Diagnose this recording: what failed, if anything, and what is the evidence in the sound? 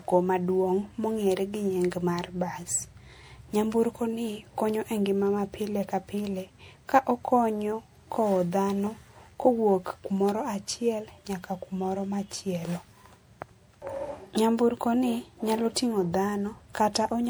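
Codec stage. The speech sounds swirly, hollow and smeared throughout, and attacks blur. This is likely generation loss, from about five MP3 passes at what sounds like 96 kbit/s.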